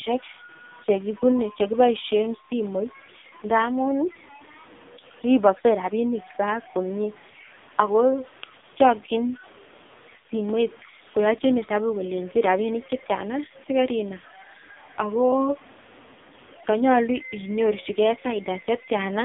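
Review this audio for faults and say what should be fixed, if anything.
Throughout the clip a grainy, signal-following distortion sits about 25 dB below the speech. It roughens quiet passages and sputters as syllables decay into silence. This is most likely low bit depth without dither. The samples appear to have been truncated to roughly 7 bits with no dither, so the rounding error is correlated with the waveform rather than spread as steady hiss. Prevention: keep at least 16 bits through the chain and apply dither whenever word length is reduced.

The whole recording also carries the AMR narrowband mobile codec sound. The band is confined to roughly 200 Hz to 3.6 kHz, with nothing above 3.7 kHz. The speech has the buzzy, synthetic quality of a pulse-excited vocal-tract model, and the codec damage is heavy. That fits one of the lowest AMR-NB modes, around 5.9 kbps, where too few pulses per subframe are left to rebuild natural excitation. 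Prevention: capture or transfer over a wideband path, or at least a higher-rate AMR mode, instead of a low-rate narrowband call.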